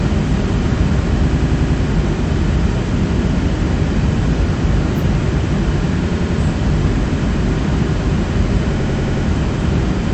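A recording of sounds stutters three times, replaying the same short slice in rapid succession: from 1.31 to 1.78 s and from 8.79 to 9.25 s the slice plays five extra times, and from 6.10 to 6.37 s three extra times. These are repeated frames. A block of compressed data, about 93 ms long, which fits a run of four frames, was sent again to the decoder, lengthening the audio by about 0.46, 0.28 and 0.46 s respectively.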